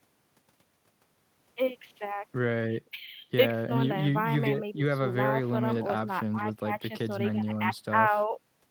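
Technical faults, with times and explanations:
Nothing technical stands out in this speech recording; it's all steady, with no faults to point to.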